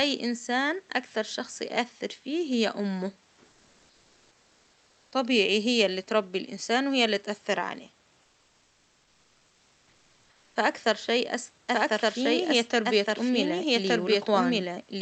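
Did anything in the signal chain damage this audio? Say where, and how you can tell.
Yes. From 8.21 to 10.55 s the real room background is replaced by comfort noise, likely from Opus discontinuous transmission in the call processing. The detailed, shifting background sits about 41 dB below the loudest sound, and here it turns into a steady, featureless hiss about 2 dB quieter that lasts just over two seconds. On a spectrogram the textured noise floor becomes a smooth, uniform band that drops out again once sound resumes.

From 11.73 s to the end there is a doubled audio track: a full-band second copy, roughly as loud as the original, trails it by about one second. It has no reverberant tail or room colouring, so it is not an acoustic echo. It points instead to a second capture path or an edit at the buffer or storage stage. On the waveform each envelope repeats a second later, and the copy begins abruptly at 11.73 s. 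Both copies show the call path's band limit at 8 kHz.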